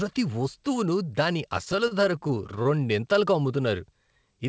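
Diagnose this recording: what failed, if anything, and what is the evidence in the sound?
Repeated stalls (stutter) run from about 1.58 s to 2.76 s, starting just after "వస్తువును దాని". This is a network and jitter-buffer fault. Packets arrived late or slower than playback, so the buffer kept emptying. Each time, the receiver stretched the last sound to bridge the hole, about 171 ms in total and about 16% of that stretch, with no gap longer than 34 ms. The speech drags and hitches, but none of it is lost. The G.722 path also cuts off everything above 8 kHz.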